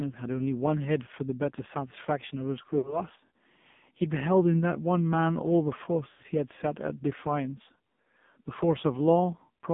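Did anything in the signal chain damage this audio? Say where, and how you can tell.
Yes. Throughout, the speech sounds thin, buzzy and synthetic, confined to roughly 150 Hz to 3.6 kHz. That is the AMR narrowband mobile codec at the codec stage: a vocal-tract model with sparse pulse excitation, heavily degraded at a low rate that fits about 5.9 kbps.

At the network stage, lost AMR speech frames cause brief smeared, fading gaps from 2.78 to 3.02 s and from 6.10 to 6.23 s. The decoder stretched the last good pitch and filter with falling gain, consistent with about 60 ms and 100 ms of missing frames.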